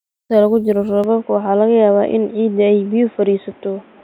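At 1.04 s the recording most likely switched its input to a poorer device, and the speech stays on that path to the end. The new device passes nothing above 3.8 kHz, so the speech abruptly turns dull and boxy, losing its upper detail. The change happens with no gap and no obvious jump in loudness, but a fresh layer of background noise appears beneath the speech, roughly 35 dB down.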